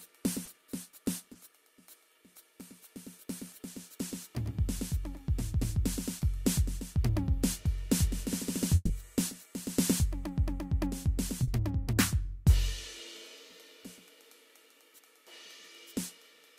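A music recording marred by short concealed packet loss at 0.45 to 0.49 s, 1.33 to 1.37 s and 11.43 to 11.49 s. At each point, a lost packet's worth of audio (20 ms in the first two, 40 ms in the third) was patched by extending the preceding sound, heard as a brief smear or wobble before the real audio blends back in. At 8.75 to 8.91 s a burst of packet loss is far longer: about 140 ms was rebuilt from the last sound and faded down, ending in roughly 20 ms of silence, so a held, fading continuation of the last sound replaces the music before it resumes further along. The missing stretch and the audible fade and dropout set it apart from the momentary patches.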